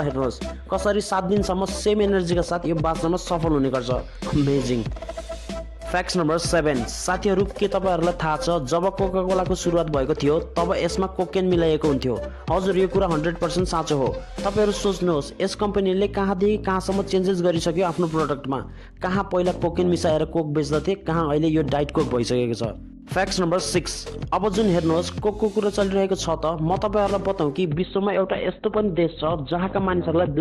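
From the start of the clip to its end, the loudest peaks show hard clipping. The signal is driven about 4 dB past what one stage can pass, so roughly one sample in a hundred is sliced flat. Those flattened tops add high harmonics, heard as brief crackle on peaks rather than a continuous fuzz. Unlike codec distortion, it follows loudness: quiet passages stay clean, and the grit appears only where the level peaks.

At 27.65 s the audio switches abruptly to an adaptive stream at a lower bitrate, which lasts until the clip ends at 30.41 s. A slowing connection pushed the player onto a much thinner version of the stream. The collapse in detail fits a drop from around 64 kbit/s to about 12 kbit/s Opus. Codec artefacts rise. There is no gap or stutter, which separates this from dropouts or buffering. A single clean step in quality also distinguishes it from clipping, which comes and goes with level.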